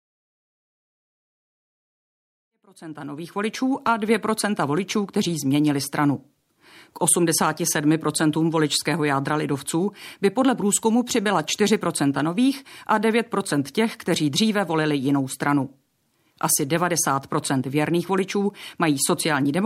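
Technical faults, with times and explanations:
No technical faults heard.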